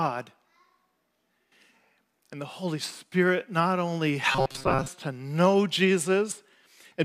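Speech, with robotic sound from repeated short buffers between 4.32 and 4.89 s: a rigid metallic buzz at 133 Hz, likely from about 7.5 ms chunks replayed over most of that stretch, showing as identical repeating waveform cycles and evenly spaced spectrogram harmonics.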